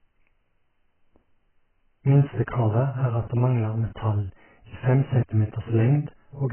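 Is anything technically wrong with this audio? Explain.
Yes. Throughout, likely AAC compression at a starved bitrate near 9 kbps quantises the spectrum coarsely and removes everything above 3.1 kHz, leaving the speech dull and smeared.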